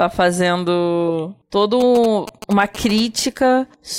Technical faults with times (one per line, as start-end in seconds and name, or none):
1.80-3.00 GSM signalling bursts